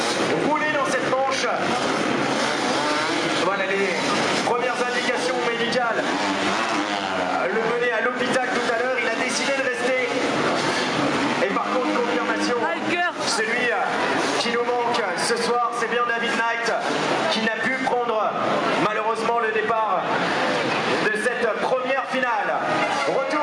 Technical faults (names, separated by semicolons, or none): gain pumping